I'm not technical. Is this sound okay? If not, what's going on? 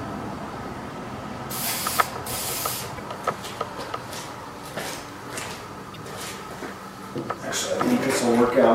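No. The file has damaged data in a compressed stream: a small stretch of the stored information is wrong, so the player can't read it properly, loses its place and has to hunt for the next clean section. You hear this as a short chirp, squawk, click or brief gap, twice: from 2.94 to 3.00 seconds and from 5.92 to 5.97 seconds, each lasting only about 60 milliseconds.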